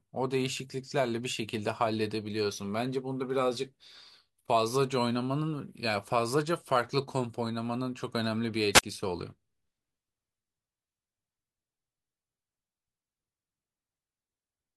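At 8.72 to 8.83 s, a wireless microphone squelch dropout occurs. The radio signal fades, hiss rises briefly, and the receiver mutes the speech for about 21 ms.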